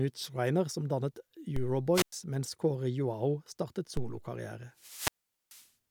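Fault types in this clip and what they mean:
DC step: The signal's zero line abruptly shifts, as when a converter recalibrates or an input carrying an offset is switched into the chain, and the offset then drains away through a very low high-pass around 2 Hz. Each jump, of about -25 dBFS, is heard as a dull low thump under the ongoing speech: once at 1.56 s, right after "som dannet", and again at 3.97 s, with the speech itself carrying on unaltered.
wireless microphone squelch dropout: The radio link from an analogue FM microphone weakens until the receiver's squelch closes and mutes its output rather than pass raw noise. Each event brings a short surge of hiss or static, then a gap of near silence before the speech returns. The first, from 1.93 to 2.12 s, holds the mute for about 102 ms. The second, from 4.75 to 5.70 s, cuts out for roughly 430 ms.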